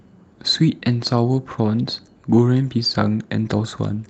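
Between 2.69 and 2.95 s the call lost several separate packets, and the decoder filled the holes from the low-bitrate backup copies that Opus carries inside each following packet: a lost packet rebuilt from error correction. About 140 ms of speech comes from those coarser copies, so nothing drops out, but that stretch turns rougher and grainier, with added noise over the speech, standing apart from the 8 kHz-bandwidth Opus coding heard across the rest of the call.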